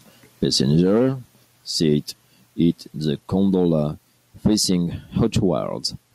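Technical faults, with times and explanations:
No technical faults detected.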